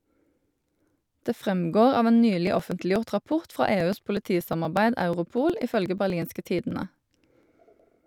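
From 2.47 s to 7.92 s, the speech picks up a steady stream of small ticks, one every 0.121 s, about fifty in all, audible wherever there is signal. These are periodic USB or driver dropouts: something repeatedly stalls the audio path at that fixed interval, and each time a few milliseconds of audio are skipped outright, so the waveform jumps and the splice clicks.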